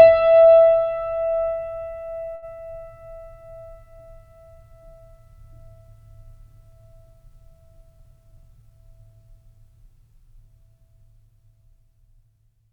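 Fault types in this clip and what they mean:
Short stall from a late packet: One packet of this music arrived late and the jitter buffer ran dry. At about 2.35 s the receiver held the last sound for 69 ms, with a slight buzz or dip. The music then resumed where it stopped, nothing lost, but 69 ms later.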